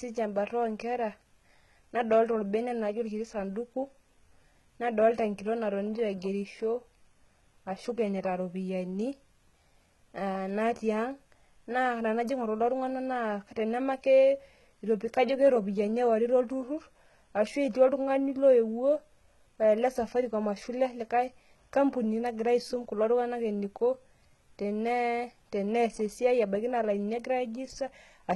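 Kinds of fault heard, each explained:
HE-AAC compression: the top end stops dead around 11.8 kHz, and the treble below sounds synthetic, with gritty, lispy s sounds. That's likely band replication faking the highs from copied lower bands; the heavy damage fits roughly 16 kbps.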